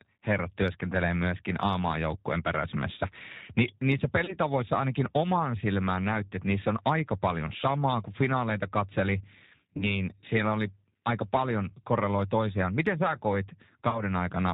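Throughout the speech, the G.729 codec damage is plainly audible. The sound has the character of G.729A running at about 8 kbit/s, where each 10 ms frame is rebuilt from a vocal tract filter, a pitch predictor and a handful of pulses rather than the original waveform. Nothing above 4 kHz comes through, so the speech is band-limited. It is intelligible but rough and synthetic, and any background noise warbles.

VoIP packet loss concealed by the speech codec occurs three times, at 4.25–4.37 s, 9.77–10.02 s and 13.90–14.01 s. Each event starts with roughly 30 ms of missing audio, which fits a single lost packet. The decoder fills that gap by extrapolating from its last pitch and filter state and lowering the gain frame by frame, so the sound is stretched into a buzzy tone or a coloured noise that fades. Because each frame builds on the previous one, the speech stays weak or distorted after packets resume, and each disturbance extends past the 30 ms gap to the times given.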